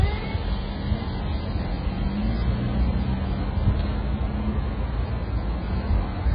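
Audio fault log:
Throughout, AAC compression, likely: nothing above 5 kHz, with a dull, smeared, warbling texture, heavy damage fitting a very low bitrate rather than plain low-pass filtering.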